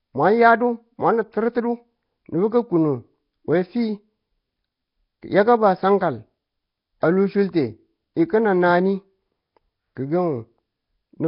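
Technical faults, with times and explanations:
Throughout: Nellymoser compression. The speech was most likely squeezed through the Nellymoser Asao codec that Flash used for microphones, at a rate that fits roughly 22 kbps. With only a fixed, small budget per sample, the coder leaves weaker bands without bits and fills them with synthetic noise, so the damage is heavy. The speech carries a rough, hissy halo and a smeared, underwater character, and nothing remains above about 5.3 kHz, which leaves it dull as well as grainy.
7.00 to 7.03 s: pre-echo. Here a sharp attack lands late in a coding block, and the quantisation noise that the coder sized for that loud onset spreads evenly across the whole block, including the quiet stretch before it. The result is about 25 ms of hiss arriving just ahead of the attack, which takes the edge off the onset so that it sounds softened and smeared instead of crisp.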